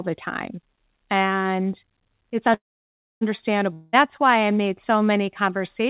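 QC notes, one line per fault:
2.54–3.23 s, call audio freeze: packets were likely held up in transit, draining the jitter buffer. The last sound is stretched into a fading buzz that gives way to about 0.62 s of near-silence. Playback then resumes where it stopped, nothing lost, running 0.67 s late.
3.73–3.95 s, long network dropout: about 0.2 s of audio likely never arrived and is gone for good. The receiver bridges the hole by extending the previous sound as a fading buzz, with no true silence, then resumes further on, skipping the lost stretch, within G.711's 4 kHz band.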